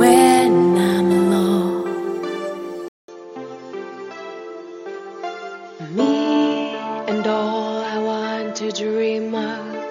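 An input switched to a poorer device at 2.88 s, and the sound stays that way to the end. After a 200 ms silence at the switch, the band stops at 7 kHz, so the audio turns duller and boxier. It also drops a few decibels in level and gains its own background noise, roughly 40 dB below the signal. The likely cause is the system changing mid-recording to a different, narrower-band microphone or headset profile.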